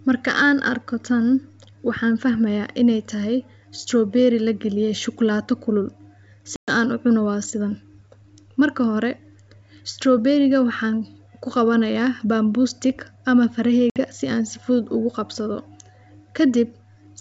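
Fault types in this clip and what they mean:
Packet loss on an ADPCM call: hard-edged silences of 120 ms and 60 ms, after which the decoder's adaptive predictor and step size briefly mistrack the sender's.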